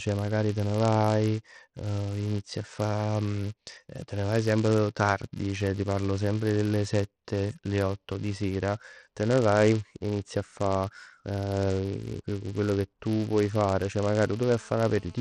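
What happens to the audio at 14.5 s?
A hard, raspy buzz sits under the speech at 14.5 s. It is a GSM phone buzz running from 14.00 to 15.16 s, at about 28 dB below the speech. A 2G phone in a call nearby transmits in bursts about 217 times a second, and the audio circuitry rectifies those radio pulses. The result is a steady 217 Hz tone rich in harmonics that has nothing to do with the speech itself.

Alongside that, a buzz at 375 Hz tracks the loudness of the speech. This is a filter restarted on every block. The filter forgets its state at each block boundary and starts from silence, so every block opens with a small transient. A 375 Hz rate fits a 128-sample block at 48 kHz. Because each tick scales with the signal, the buzz swells and fades with the speech.

The speech also sounds gritty and dull, with no content above 12.6 kHz and a coarse, grainy edge on the remaining treble. The likely cause is Bluetooth SBC compression at a low bitrate, around 80 kbps. 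At that rate the codec cannot fund its upper sub-bands, so they are dropped, and the bands it keeps are quantised roughly enough to add audible noise and aliasing.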